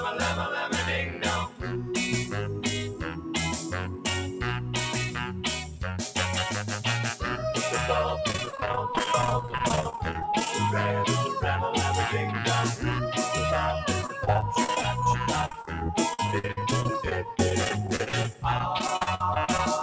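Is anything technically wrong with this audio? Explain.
Yes, there are three problems.

Throughout, a noise suppressor built for speech is treating steady and fading parts of the sound as noise, so the level pumps by around 5 dB.

It cuts the sound hardest at 1.06–1.23, 1.48–1.91, 2.86–3.33, 3.62–4.05, 4.27–4.42, 5.09–5.44 and 5.64–5.82 s, dipping about 6 to 9 dB as held sound and tails get pulled down.

From 8.28 to 10.49 s and again from 14.01 to 19.59 s there's repeated packet loss. Dozens of holes, up to 26 ms and then 54 ms long, get patched by stretching the previous sound, which makes it choppy and robotic. Nothing above 8 kHz gets through the call path, which fits G.722.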